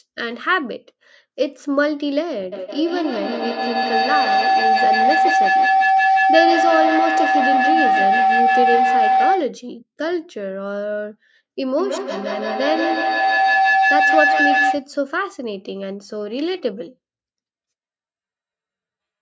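A tone near 700 Hz swells over the speech from 2.52 to 9.54 s, peaking about 5 dB above it, then returns from 11.79 to 14.91 s at about 4 dB, its loop repeating roughly every 150 ms. This is feedback howl: microphone and loudspeaker share a room, each loop trip adding gain.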